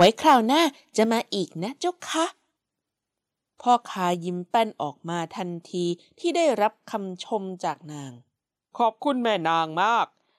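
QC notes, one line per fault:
0.00–0.62 s, microphone overload: the loudest peaks are flattened, giving a harsh crackle on the strongest syllables, with a small share of samples pinned at the converter's limit about 7 dB past the limit, likely from input volume set too high. Unlike a level drop, the distortion sits inside the peaks themselves.
0.05 s, microphone volume stepped down: voice and background together fall about 2 dB in one instant step, likely the call software cutting the device's input volume after the distorted opening peaks. Unlike overload, this step only changes loudness, abruptly rather than smoothly.
1.01–1.03 s, microphone overload: a brief crackling edge as a short peak is squared off, only about 2 dB past the limit and affecting a couple of percent of samples, likely from input volume still set too high. It is milder and shorter than the opening burst, but the same flattened-top harshness.
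1.05 s, microphone volume stepped down: a second, larger sudden drop of about 4 dB in voice and background together, likely the software lowering input volume again right after the peak at 1.01 s. There is no added grit, just a sharp step in level.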